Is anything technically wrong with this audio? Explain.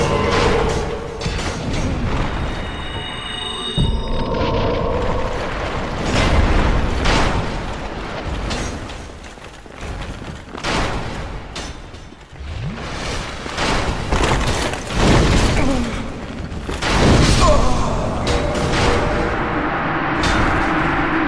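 No, nothing technical stands out here; the audio holds together fine and gives no sign of trouble anywhere along the way.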